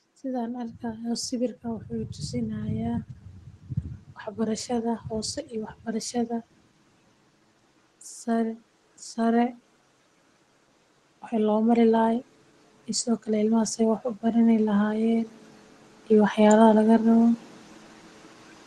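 Automatic gain rising appears first from 0.22 to 3.08 s, when the level control judges the incoming speech too quiet and lifts its gain by about 6 dB, so voice and room noise swell together over those three seconds. It recurs from 11.29 to 15.29 s, a slower climb of about 7 dB across four seconds. The call path adds its coding noise and limits the top end near 12 kHz, which fits Opus at around 20 kbps.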